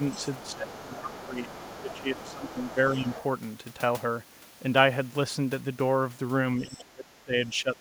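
From 0.0 to 3.24 s, the other side's voice leaks through. A second voice sits underneath the talker, about 20 dB down. It is likely echo from a loudspeaker that the echo canceller failed to remove. During this stretch, speech is suppressed in double talk. From 0.52 to 1.49 s, the talker's voice dips by about 15 dB. From 1.82 to 2.77 s, it dips again by about 10 dB. The canceller likely mistook both voices for echo and turned everything down. The talker sounds pulled back. At 6.6 to 6.78 s, a brief scrap of the far voice leaks through again, about 25 dB down. The talker drops hard from 6.63 to 7.34 s, by about 25 dB. A last short dip of about 10 dB follows from 7.6 to 7.76 s.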